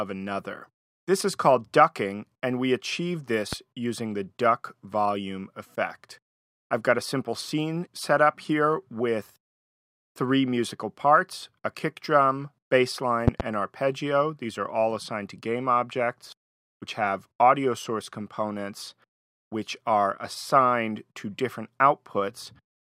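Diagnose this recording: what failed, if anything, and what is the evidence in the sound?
Loud pops: a single sharp one around 3.53 s, then a double pop from 13.28 to 13.43 s, well above the sound. Likely a plug or switch transient in the analogue wiring.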